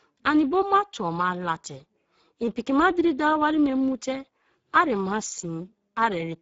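Throughout the clip the speech sounds hoarse and noisy, with a plainly audible grainy roughness, and nothing is heard above about 7.7 kHz. This is Speex codec damage: the low-bitrate CELP coding, consistent with roughly 10 kbps, leaves too few bits for the excitation.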